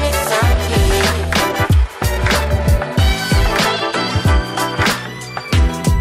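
No technical fault can be heard anywhere in this audio. There is no moment in it that calls for a timestamp or an explanation.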